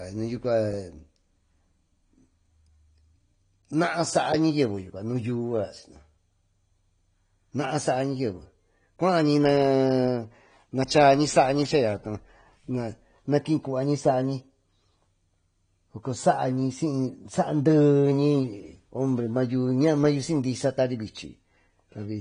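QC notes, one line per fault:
Throughout: AAC compression. The speech has nothing above 9.9 kHz and sounds dull and smeared, with plainly audible coding damage. This is likely AAC-LC coding at a low rate, which fits 32 kbps, where the encoder lowers its cut-off and quantises coarsely to save bits.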